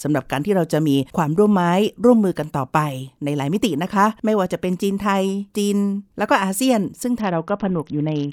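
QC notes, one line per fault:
7.2–8.3 s, Bluetooth SBC bit pool drop: the last second goes dull and gritty, which fits the link squeezing the bit pool from 28 down to about 7 (roughly 66 kbps), starving the upper sub-bands and coarsely quantising the rest through to the end.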